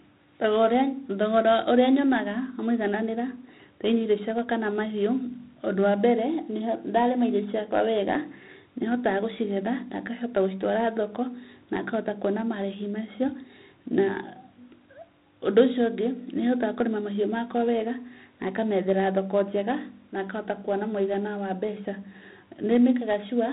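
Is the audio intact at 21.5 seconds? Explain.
No. At 21.5 s, as throughout the speech, there is 4-bit ADPCM compression. Each sample is coded as a coarse step from a prediction, leaving heavy gritty hiss that tracks loud passages. Nothing sounds above 3.9 kHz, and the damage fits about 32 kbps.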